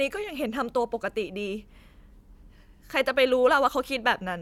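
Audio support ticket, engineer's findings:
No technical fault found on the speech recording. Nothing to action; ticket can be closed.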